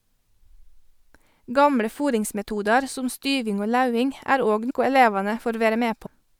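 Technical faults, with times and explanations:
4.69 s and 6.05–6.07 s, compressed frames skipped: the speech jumps ahead by about a tenth and then a fifth of a second, which fits several lost frames of about 26 ms each. The overlapping neighbours leave a brief smeared blip rather than a hard click or a silent gap.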